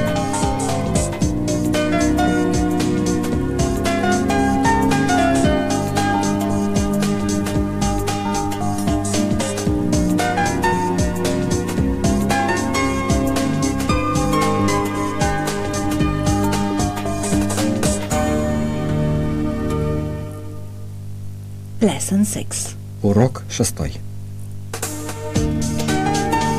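Nothing in the audio stands out as a technical problem; there's nothing here worth flagging.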